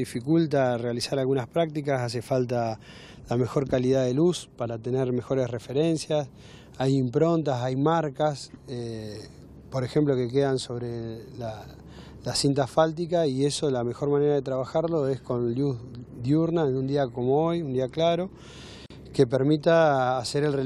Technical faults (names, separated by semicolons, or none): gap at a join of encoded pieces